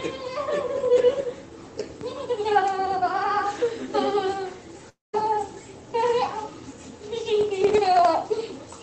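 From 4.89 to 5.15 s the sound smears into a fading buzzy tail, thins to near silence for roughly the last 160 ms, and then resumes abruptly, with about 240 ms simply gone rather than delayed. That pattern points to a long network dropout as the likely cause. Packets stopped arriving, the receiver padded the gap by extending the last sound as it decayed, and playback picked up later without recovering the missing stretch.

Between 7.41 and 8.05 s a gritty crackle tears across the sound, a dense run of tiny clicks that stops once the stretch ends. This is processor overload crackle. The audio processing repeatedly failed to finish its small buffers on time, and each missed deadline dropped a sliver of silence with hard edges into the output. The fine, rapid texture fits very short buffers of around a millisecond and a half, with something like twenty misses in that stretch. Throughout the clip, the call path's Opus coding limits the top end to 8 kHz.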